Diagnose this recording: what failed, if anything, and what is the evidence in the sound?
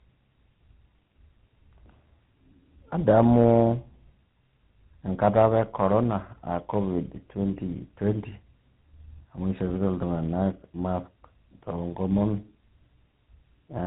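Tandem speech coding is the culprit, and it sits at the codec stage of the call path. The speech sounds rough, muffled and warbly right through, with nothing above 3.9 kHz. That pattern fits three speech codecs in a row, something like two CVSD hops ending in GSM full rate, with A-law links in between. Each border decodes the audio and codes it again, so every coder starts from the last one's damage. The errors stack up instead of staying at one codec's level.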